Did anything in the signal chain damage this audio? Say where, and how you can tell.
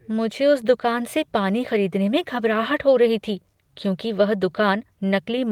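No, nothing in the signal chain audibly damaged this audio.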